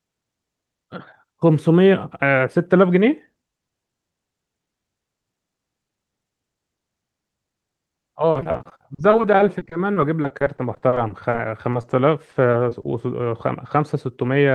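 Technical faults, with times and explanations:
8.31–11.85 s, repeated packet loss (robotic sound): packets kept going missing or arriving late across this stretch, with gaps up to 50 ms. Each hole was patched by stretching the previous sound, so about a quarter of the span is concealed. The speech turns choppy, with pieces dropped out.
12.31–12.85 s, repeated packet loss (robotic sound): a shorter burst of the same loss, with gaps of about 20 ms each, about 15 percent of the span concealed. The brief stretched patches make the speech choppy over the call path's Opus sound, which stops at 12 kHz.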